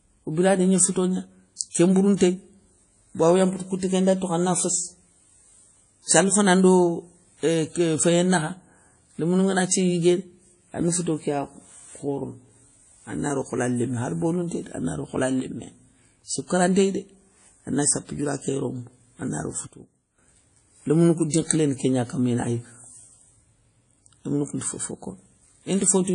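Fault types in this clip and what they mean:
WMA compression: Throughout, the speech has a ringing, washy quality with plainly audible codec damage and a hiss that rises and falls with the signal, most likely from a WMA encoder at a low bitrate, around 32 kbps. Each block's quantisation noise spreads over tens of milliseconds, and weak spectral lines are dropped. On a spectrogram there is nothing above 10.1 kHz, and the upper bands look patchy, with isolated blocks of energy where finer detail has been zeroed.
Pre-echo: Two attacks are preceded by a short hiss: one at 1.56 s, right after "biradi gni fouto gna", with noise spread over 42 ms, and one at 2.17 s, spread over 40 ms. A transform codec spreads its quantisation noise across a whole block, so the noise sized for a loud onset also fills the quiet moment before it. The onset sounds softened. A spectrogram shows a faint broadband smear leading each transient, and the waveform shows low-level fuzz before the attack.
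Sudden gain jump: The speech and its background noise drop in level together, instantly, with no fade. The first drop is about 6 dB at 15.40 s, after "dé ana ro hola", and lasts 0.21 s. The second is about 13 dB at 19.67 s, after "ké yorombo ana ro", and lasts 0.51 s. The likely cause is a digital gain change applied between adjacent samples without a ramp. The waveform envelope steps down abruptly and later recovers, and the spectrogram darkens uniformly across all frequencies for that stretch.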